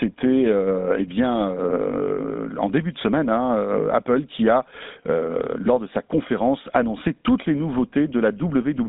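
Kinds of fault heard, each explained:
GSM full-rate codec, throughout: speech is rebuilt from a vocal-tract model driven by sparse pulses, leaving plainly audible buzzy roughness and nothing above 3.8 kHz.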